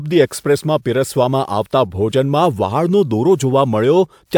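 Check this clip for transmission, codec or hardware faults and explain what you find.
No fault can be heard anywhere along the speech signal's path from capture to playback.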